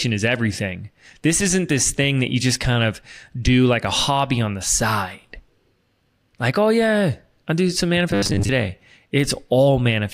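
From 8.11 to 8.49 s the speech goes robotic, a rigid metallic buzz at 100 Hz that only loosely tracks the words. It's most likely repeated short buffers: audio arrived late and most of that stretch was a looped 10 ms slice.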